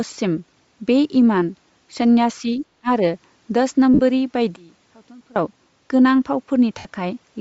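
Throughout, the speech has a breathy, grainy edge with a noisy top end, likely Bluetooth LC3 compression at a low bitrate around 32 kbps, with 10 ms frames.

From 2.81 to 2.88 s the voice dips by roughly 30 dB for about 70 ms, likely a sign of speech suppressed in double talk by an echo canceller.

At 3.94 to 4.00 s a 50 ms stretch turns into a noisy smear. These are lost LE Audio frames, about five 10 ms frames, concealed by the decoder reusing the last spectrum.

From 4.56 to 5.36 s the speech drops by about 24 dB. One channel inverted is the likely cause, so the centred voice cancels when the channels are summed to mono.

At 6.78 to 6.86 s, about 70 ms more smears into noise as further lost LE Audio frames are concealed, about seven frames' worth.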